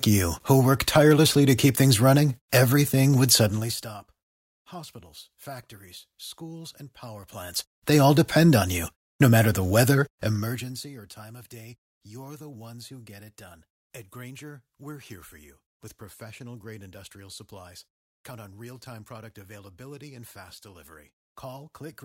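From 10.16 to 10.92 s the speech level falls by roughly 25 dB in unsmoothed 1 dB steps, about thirty per second. Each step leaves a small click, so the fade carries zipper noise, a fine ticking that lasts while the level drops.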